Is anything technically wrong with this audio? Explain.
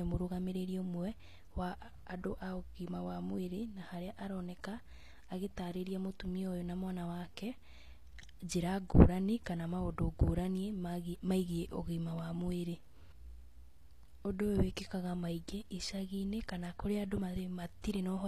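Yes. Throughout the speech, the treble sounds gritty and metallic, with lispy s sounds. This is likely HE-AAC compression rebuilding the upper spectrum from copied lower bands, which fits a low bitrate around 24 kbps.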